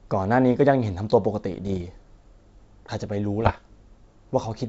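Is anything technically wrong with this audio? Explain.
Yes. Bit errors on an ADPCM link hit the speech at 1.51–1.83 s and 3.40–3.59 s, at roughly half a percent and one percent respectively. Each flipped bit corrupts the decoder's step size and prediction, so it rings on as pops and rough bursts with brief level jumps over the wideband G.722 sound.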